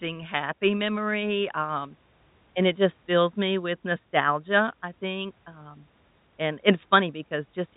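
No technical faults can be heard in this speech. It carries the narrow band of G.711 telephone coding, with nothing above about 3.8 kHz, and the coding leaves at most faint traces.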